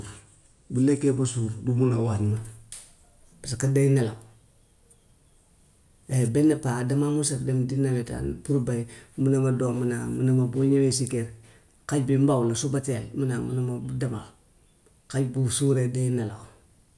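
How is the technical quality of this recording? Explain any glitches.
From 2.32 s to the end, the speech plays back slightly fast and high, running about 1.09 times normal speed and sitting roughly 1.5 semitones sharp, so it sounds hurried. This is a wrong sample rate fault: the samples are clocked out faster than they were captured, with no conversion, so speed and pitch rise together by the same ratio. The shift fits audio recorded at 22 kHz being played at 24 kHz.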